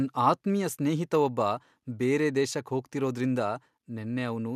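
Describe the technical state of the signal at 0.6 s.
At 0.6 s the signal is intact, with no audible fault at that point in the speech.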